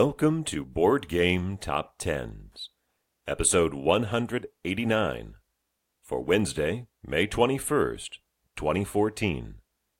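No technical faults are audible.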